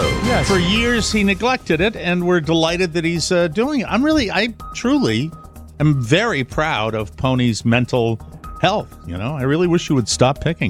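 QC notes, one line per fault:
Nothing stood out on listening.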